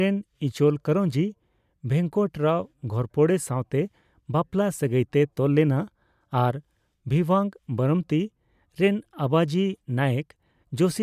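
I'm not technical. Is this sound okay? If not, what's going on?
Yes, no technical faults are audible in this speech recording.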